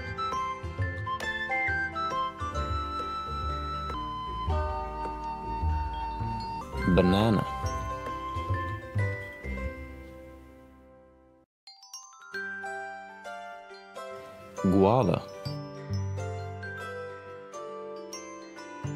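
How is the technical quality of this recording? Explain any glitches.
One glitch stands out, a section at the wrong speed. From 3.94 to 6.61 s the sound drops about four semitones and drags, running at 0.774 times normal speed. Pitch and tempo fall together, likely because that stretch was played back against the wrong clock.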